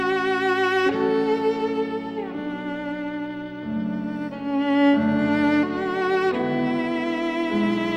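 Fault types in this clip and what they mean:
No technical faults are audible.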